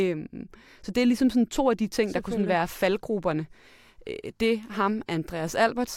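Speech recording, with nothing technically wrong to be heard anywhere in it. No fault turns up at any point, so there are no times or causes to give.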